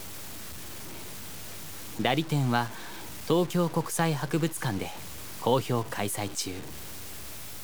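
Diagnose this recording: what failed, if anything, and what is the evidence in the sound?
What failed here looks like the sample-format conversion stage, most likely a truncation down to something like 6 bits with no dither. The grit runs through the whole clip and tracks the sound itself, roughest on quiet passages, with the faintest bits sputtering or dropping out. The error sits only about 15 dB under the signal. That's low bit depth without dither: rounding errors correlate with the waveform.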